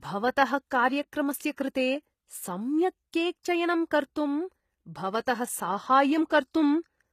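Throughout, the treble sounds synthetic and gritty, and nothing reaches above 14.9 kHz. This is likely HE-AAC compression, with rebuilt upper bands, fitting a bitrate around 20 kbps.

From 1.56 to 1.58 s there is pre-echo. A short hiss smears about 20 ms ahead of a sharp attack, softening its onset.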